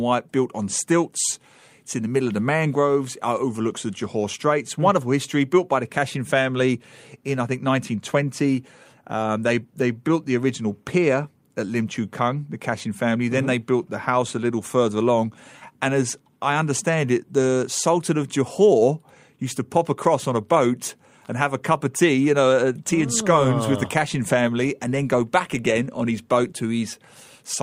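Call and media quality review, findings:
No audible faults found in the speech recording; nothing to escalate.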